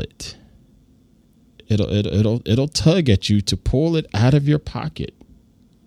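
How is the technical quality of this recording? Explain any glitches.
One glitch affects this speech recording: a corrupt frame decoded at 1.78 s, just before "it'll it'll it'll tug". A few damaged compressed frames were played despite flipped bits, so misread gains and codes placed energy at wrong frequencies, producing a brief chirp, squeak, blip or burst of noise peaking around -20 dBFS.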